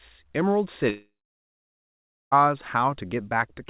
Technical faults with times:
0.90-2.33 long network dropout

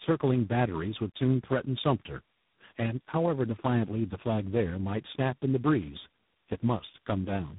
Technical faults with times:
0.00-7.59 tandem speech coding

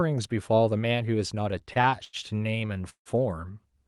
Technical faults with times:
1.51-3.09 repeated stalls (stutter)

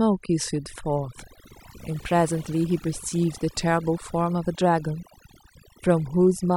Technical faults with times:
0.00-6.56 overdone noise removal

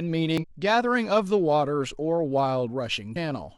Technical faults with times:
0.37-0.44 damaged data in a compressed stream
3.11-3.16 damaged data in a compressed stream

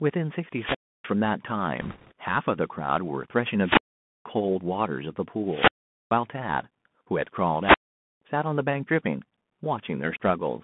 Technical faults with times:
0.00-10.63 Bluetooth CVSD headset codec
0.51-1.13 wireless microphone squelch dropout
1.81-2.12 bit errors on a Bluetooth voice link
3.59-4.28 wireless microphone squelch dropout
5.45-6.15 wireless microphone squelch dropout
7.60-8.22 wireless microphone squelch dropout

